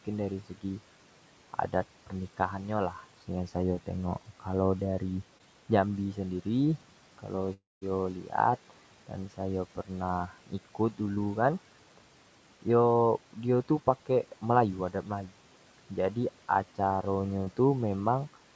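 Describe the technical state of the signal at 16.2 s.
At 16.2 s the speech is intact, with no dropout, distortion or other fault in the signal.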